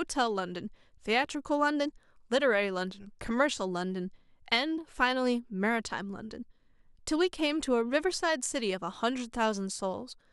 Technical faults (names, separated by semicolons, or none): none